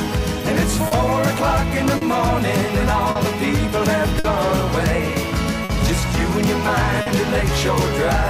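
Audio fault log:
throughout, clock drift between sender and receiver: The sending clock runs a few percent slow compared with the receiving clock, about 4 percent. Audio arrives more slowly than it is played out, so the jitter buffer keeps draining. The receiver keeps repeating short pieces, producing small timing hiccups at uneven intervals across the whole clip rather than one isolated glitch.
0.87 s, 1.97 s, 3.11 s, 4.19 s, 5.64 s and 7.01 s, short stall from a late packet: At each point the buffer was empty when the next packet was due. The receiver held the last sound for 40 ms at the first three times and 50 ms at the last three, then resumed from the same place. No audio is lost, but each event leaves a briefly stretched sound with a faint buzz or dip. Each one also pushes playback later by the length of the hold.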